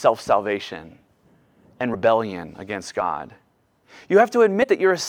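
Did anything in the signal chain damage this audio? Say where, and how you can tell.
Yes, at the codec stage: compressed frames skipped at 1.93–1.95 s and 4.62–4.65 s. The speech jumps ahead roughly 50 and 70 ms rather than leaving silent gaps.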